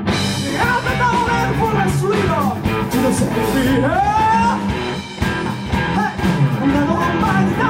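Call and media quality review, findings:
Doubled audio track from 5.46 s to end. Second full-band copy trails by roughly one second, about 10 dB down, dry, no decay; starts abruptly. Likely a slower duplicate capture path or misaligned edit mixing two copies.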